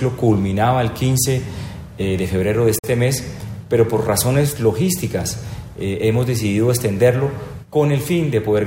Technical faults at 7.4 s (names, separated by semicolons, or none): none